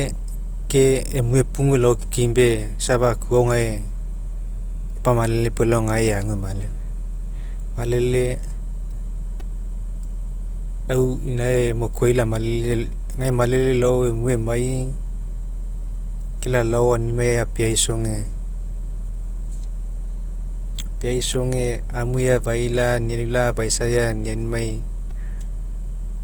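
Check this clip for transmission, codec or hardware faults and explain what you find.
Two kinds of fault affect this speech recording: codec coloration throughout and two brief playback stutters.

Opus compression, throughout: grainy, rough texture across the full band, which is likely Opus in its CELT music mode at a low rate, perhaps around 24 kbps, filling starved bands with folded or noise energy.

Repeated buffer, at 9.40 s and 25.11 s: brief buzzy clicks. A 2.67 ms chunk, consistent with a 128-sample buffer, replays four times, then three, because fresh audio arrived late.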